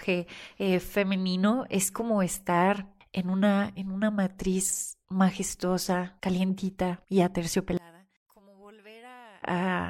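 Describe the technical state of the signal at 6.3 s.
At 6.3 s the speech signal is intact, with no audible fault at that moment.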